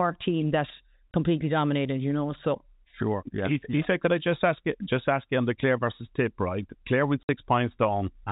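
At 1.11 s the speech drops out abruptly for 30 ms, and at 7.23 s a longer 60 ms hole appears, each gap opening and closing with hard edges. This is packet loss filled with silence. Audio went missing in transit and the receiver played dead air in its place. The gap lengths point to 30 ms packets, with one lost first and two in a row later, heard over the band-limited G.711 telephone sound.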